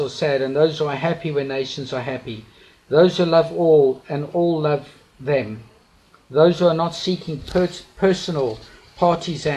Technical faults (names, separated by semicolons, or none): none